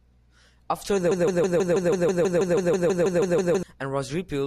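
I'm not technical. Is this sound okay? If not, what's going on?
No. The playback or stream likely stalled and kept replaying the last scrap it held, a broken-record loop. From 1.11 to 3.63 seconds, a 0.16-second snippet of speech repeats 16 times back to back, and the speech meant for that stretch is lost.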